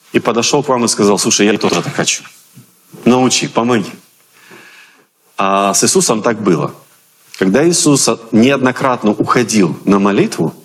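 Gain pumping runs through the whole recording. The likely cause is input gain set far too high for the microphone, with a fast limiter or compressor pulling the level down on every loud sound and letting it recover in between. The level swings by around 10 dB. Loud and soft parts sit unnaturally close together, so the sound feels squashed and flattened.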